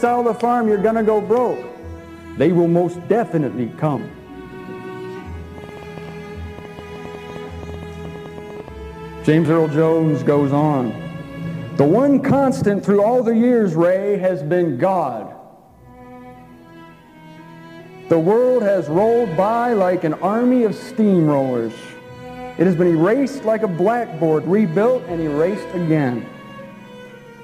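From 5.58 s to 8.69 s a train of clicks runs over the audio: around thirty similar sharp ticks at about 8.4 per second, spaced unevenly, with peaks roughly as loud as the signal itself. On a waveform they appear as narrow spikes standing out of the program; on a spectrogram, as thin vertical lines spanning the full frequency range at irregular intervals. The likely cause is interference from nearby equipment or a faulty connection or power supply.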